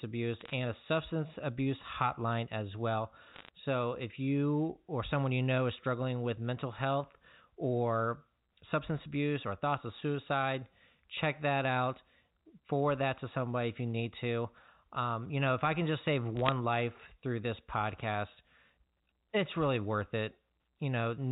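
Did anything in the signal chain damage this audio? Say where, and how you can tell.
Yes. Short bursts of sharp ticks and crackle sit over the speech at 0.40 to 0.54 s, 3.32 to 3.49 s and 16.37 to 16.52 s. These are bit errors on a digital phone line. Flipped bits in the G.711 stream corrupt single samples, giving clicks where sign or high bits are hit.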